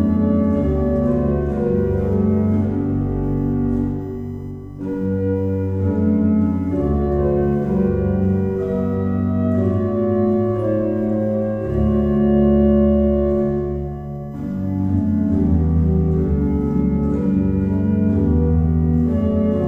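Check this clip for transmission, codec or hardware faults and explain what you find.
One hardware fault is present: USB whine, running through the whole clip. A fixed tone sits at 1 kHz and is strongest at its 2 kHz harmonic, roughly 45 dB under the sound. Current drawn in the bus's 1 ms frames leaks through power or ground. Unlike mains hum, its pitch lies in the kHz range rather than at 50 or 60 Hz.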